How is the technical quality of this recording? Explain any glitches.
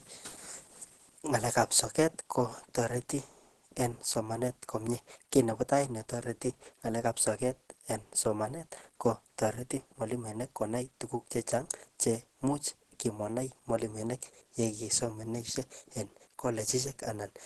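The recording is compromised by plainly audible codec damage across the whole clip. Opus compression runs from start to finish. The speech sounds hoarse and muffled, with nothing above 12.1 kHz. The likely cause is Opus in its hybrid speech mode, which trims the top band and rebuilds detail coarsely. The damage points to a low bitrate around 16 kbps.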